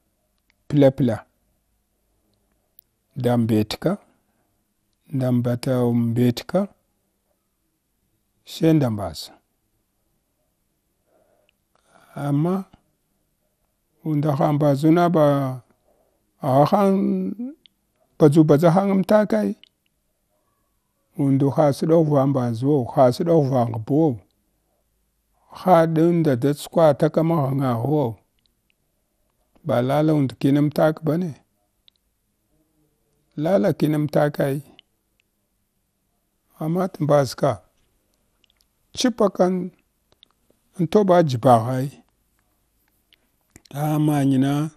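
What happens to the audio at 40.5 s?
At 40.5 s the speech sounds dull and plainly gurgly, with a grainy, watery edge. Nothing reaches above about 15.1 kHz, and upper detail flickers in and out. This runs through the whole clip. It is likely MP2 compression at a rate around 80 kbps. Layer II divides the spectrum into 32 sub-bands and shares out too few bits, so upper bands switch off and the remaining ones are coarsely quantised.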